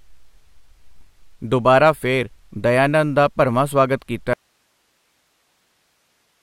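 A speech clip with two faults. From 0.98 to 1.02 s, just before "ਦੁਬਾਰਾ ਫਿਰ", chunks play out of order: one 10 ms chunk lands three chunks late, so the sound jumbles briefly. Unlike a dropout, nothing is missing; the same audio is simply reordered. At 4.33 s, right after "ਦਾ ਭਰਵਾਂ ਸਵਾਗਤ", an audio dropout to a faint residue begins and lasts to the end. The speech cuts off abruptly, leaving only hiss about 45 dB below the signal, likely because the source was lost while the path after it stayed live. A pause or fade would not cut off this suddenly and leave a steady hiss behind.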